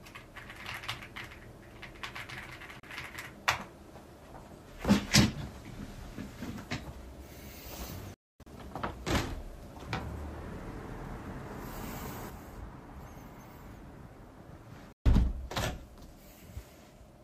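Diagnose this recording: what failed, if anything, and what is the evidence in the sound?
The sound cuts abruptly to silence with a fast fade of about 3 ms, at 2.80 to 2.84 s, at 8.14 to 8.47 s as scattered holes with one run of about 256 ms, and at 14.92 to 15.06 s. This is a digital broadcast dropout at the reception stage: the receiver muted on lost or corrupt frames, and the 32 ms gap points to one frame of that length.

From 12.30 s to the end, the level drops abruptly by about 6 dB and stays down. This is likely a one channel drops out fault in the stereo path: with one side gone, the mono sum carries only half of the shared content.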